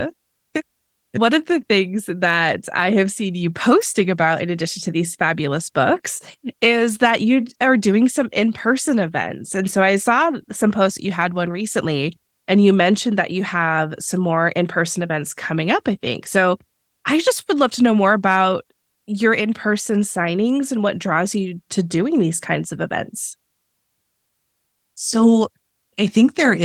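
At 3.82 s, between "I have seen you" and "about in addition to", a sharp snap cuts across the speech. It lasts only a few milliseconds. This is likely an electrical switching spike, an arc from a nearby switch or motor picked up by the audio line.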